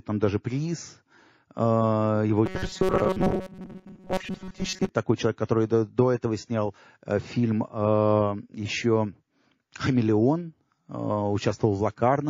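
The whole speech clip carries plainly audible MP3 compression damage. The sound turns watery and swirly. Weak detail flickers in and out between frames. The harsh loss points to a low bitrate, likely around 32 kbps.

From 2.46 to 4.89 s, just before "такой человек", there is robotic sound from repeated short buffers. A rigid metallic buzz at 188 Hz rides over the speech. That fits tiny chunks of about 5.3 ms being replayed, likely because new audio arrived too seldom. Most of the stretch is repeats.

Pre-echo runs from 5.47 to 5.49 s, between "такой человек" and "до до этого снял". A short hiss, about 11 dB above the surrounding level, leaks in for 28 ms before an attack. The noise meant for the loud onset was spread across a long block of about 72 ms. Short blocks were never used.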